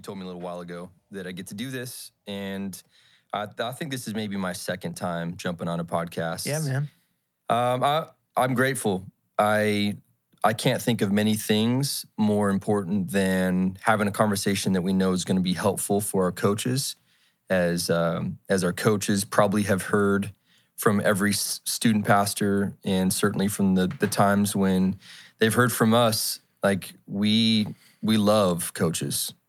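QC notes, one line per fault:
0.05–2.84 s and 3.56–9.66 s, automatic gain rising: the gain control, hearing too quiet an input, ramps up by about 5 dB, then about 8 dB. Background swells with the speech, unlike a talker simply speaking louder.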